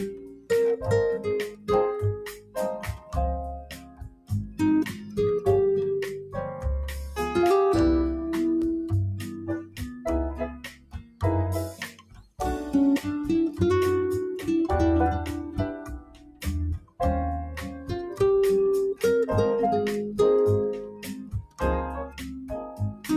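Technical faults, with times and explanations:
Throughout: noise suppressor applied to music or sounds. A speech-tuned suppressor treats steady tones and tails as noise, swinging level by roughly 15 dB, so sustained sound pumps while attacks survive.
0.07–0.5 s, 1.48–5.18 s, 9.19–12.41 s, 15.81–17.0 s, 17.68–17.9 s, 20.88–23.08 s: sound cut by the noise suppressor. Held and decaying parts sink by up to about 17 dB (only about 7 dB at 17.68 s). Onsets mostly come through, unlike a plain fade.
8.62 s: block of digital silence. A 2.9 ms run of zeros, which fits a 128-sample buffer left unfilled, gives a hard cut, heard as a tick rather than a faded gap.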